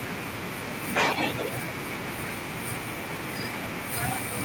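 From 0.93 to 1.52 s an echo leak is heard: a delayed copy of the speech trails it by 288 ms, likely from a far-end loudspeaker whose echo canceller let residue through. On a spectrogram the harmonic pattern repeats, shifted later; the waveform shows duplicated envelopes.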